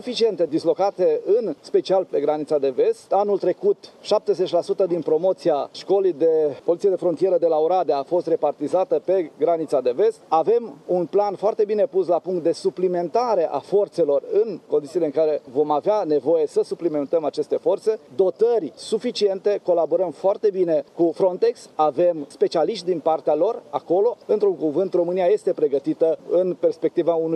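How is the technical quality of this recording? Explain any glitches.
No glitches are audible, and the signal is technically sound, with nothing interrupting or disturbing it.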